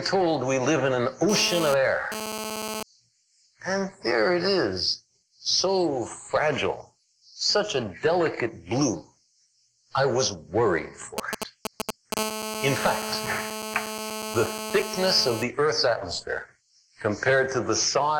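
From 1.29 to 2.83 s a GSM phone buzz cuts in: a nearby 2G handset transmitting data in bursts 217 times a second, rectified by the audio circuitry. It is a hard, raspy buzz about 7 dB below the sound, coming and going, seen as intermittent stacks of harmonics on 217 Hz multiples.

At 11.18 to 12.14 s come GSM signalling bursts, the phone sending only short groups of radio bursts. They give a galloping dit-dit-dit of ticks and brief 217 Hz buzzes, roughly as loud as the sound itself. On a waveform they appear as clustered spiky packets, and on a spectrogram as short vertical bars of harmonics.

Almost immediately, from 12.17 to 15.43 s, the buzz returns with the phone in a call, now continuous at about 7 dB below the sound. A spectrogram shows unbroken horizontal lines at 217 Hz and its many harmonics.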